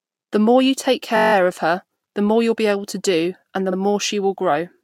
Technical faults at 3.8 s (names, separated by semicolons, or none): repeated frames